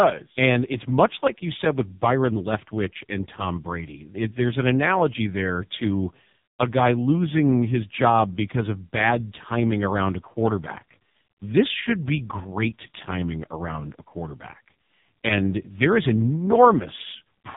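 Throughout, the speech carries heavy AMR narrowband mobile codec damage: nothing above 3.8 kHz survives, and the voice sounds buzzy and synthetic, which fits the lowest 4.75 kbps mode. A plain low-pass filter would dull the sound without this rebuilt, pulse-driven texture.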